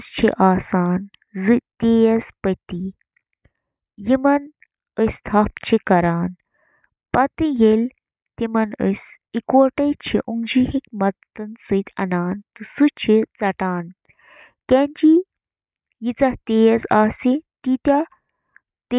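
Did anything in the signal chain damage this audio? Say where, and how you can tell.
No, nothing in the signal chain audibly damaged this speech recording. None of the stages between capture and playback leaves a mark that can be heard here.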